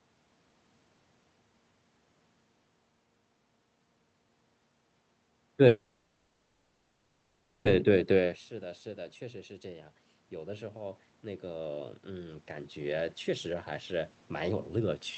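Speech carried over an Opus call path, band-limited at about 8 kHz with coding noise consistent with a bitrate around 32 kbps. Between 5.67 and 7.67 s the sound stalls in a call audio freeze: the last sound is stretched into a fading buzz lasting nearly 2 s, with no drop to true silence, and then the speech resumes exactly where it left off, so nothing is lost but a 1.98 s gap has been inserted. The likely cause is packets held up in transit until the jitter buffer ran dry, with the receiver improvising audio until they arrived. From 9.62 s to the end, around 15.06 s, automatic gain rising is audible. The input level falls by about 19 dB, in line with the talker shifting position, as also heard around 8 s. The gain control answers by slowly raising its gain by about 10 dB, so the speech and the room noise swell together over several seconds instead of jumping. Within that stretch, from 12.96 to 14.84 s, a jitter buffer speed-up makes the speech run at about 109% of normal rate while its pitch stays put, so it sounds hurried. 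The receiver is trimming surplus buffered audio, roughly 0.2 s in total, by cutting out many short pitch-period slices in quick succession to bring the delay back down.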